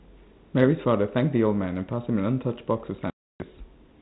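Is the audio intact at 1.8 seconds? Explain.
Yes, the speech at 1.8 seconds is intact, with nothing beyond the band-limited character of the 32 kbit/s G.726 ADPCM telephone coding it passes through.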